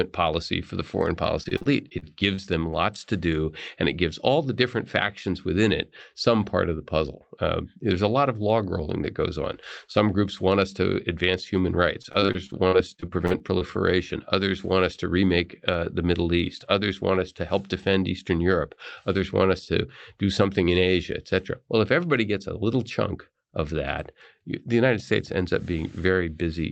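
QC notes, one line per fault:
1.43–2.40 s, repeated packet loss (robotic sound): short dropouts, the longest about 37 ms, recur across this stretch. Each is patched by stretching the preceding sound, so about 18% of the span is filler, giving a choppy texture with fragments missing.
12.02–13.72 s, repeated packet loss (robotic sound): a denser run of holes, up to about 46 ms each, covers roughly a fifth of the span with concealment. Repeated extrapolation of the last sound produces a choppy sound with pieces missing through the call codec's 8 kHz band limit.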